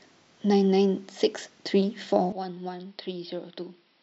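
An input switched to a poorer device, from 2.32 s to the end of this speech clip, is the likely cause of the sudden change in sound. With no gap at the switch, the speech abruptly loses everything above 5.6 kHz and turns duller and boxier. The level falls by roughly 10 dB, and a faint new noise floor appears, around 50 dB below the speech. This is consistent with a second microphone or a headset's call profile taking over mid-recording.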